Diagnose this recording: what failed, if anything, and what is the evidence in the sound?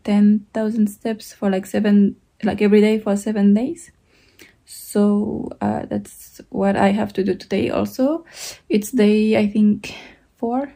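Nothing failed; no fault is audible anywhere in the recording.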